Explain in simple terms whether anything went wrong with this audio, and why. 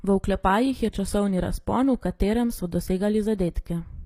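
Something did go wrong: the speech was most likely squeezed with HE-AAC compression, which stores only the lower tones and fakes the treble by copying them upward. Throughout the clip, that invented top end makes s sounds gritty, lispy and metallic.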